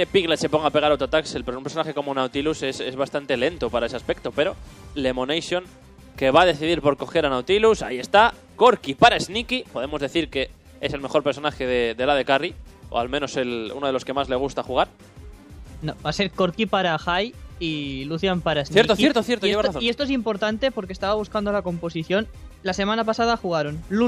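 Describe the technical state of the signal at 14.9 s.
At 14.9 s the signal is intact, with no audible fault.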